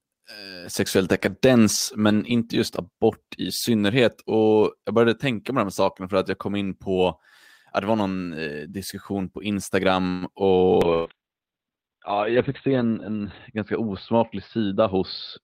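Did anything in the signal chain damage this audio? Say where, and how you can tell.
Yes, in the network path and the receiver's call processing.

At the network and jitter-buffer stage, around 10.09 to 10.25 s there is a call audio freeze, most likely from packets held up in transit so the jitter buffer ran empty. The receiver stretched the last sound for about 121 ms as a fading buzz or hiss rather than silence. When the packets arrived, playback carried on from where it stopped with nothing lost, so the speech after this point sits about 121 ms later than before.

At the codec, a call bitrate drop starts at 10.85 s and lasts to the end. The bandwidth estimate collapsed and the Opus encoder went from 40 kbps to 7 kbps, staying at that floor for about 2.6 s. At that rate it also narrowed the audio band from 20 kHz to 4 kHz, so the speech loses its air and sibilance and turns muffled and rough.

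In the network, a burst of packet loss falls at 10.94 to 11.08 s, just as the bitrate drop begins. About 120 ms of audio never arrived in time. The receiver concealed the hole with 116 ms of synthesized continuation that fades out as it goes. Speech then resumes further along, so the part in between is missing.

At the jitter buffer, a jitter buffer speed-up runs from 14.13 to 14.96 s. Too much audio had built up, so the receiver trimmed short pitch-period slices repeatedly to pull the delay back down, roughly a tenth of a second in total. Playback runs at about 109% speed over that stretch with the pitch unchanged, so the speech sounds briefly hurried.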